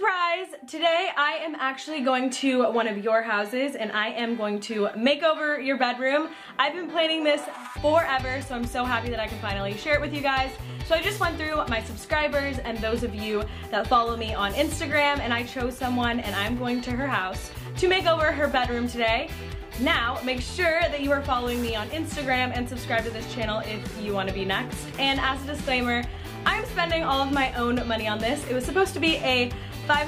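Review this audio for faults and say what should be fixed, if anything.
At 14.92 s, new audio arrived late and the device replayed its last buffer twice more, which fits a 5 ms buffer, producing a brief buzzy click. Fixing this repeated buffer means giving playback more headroom with a larger buffer or higher thread priority, so fresh audio always arrives before the device needs it.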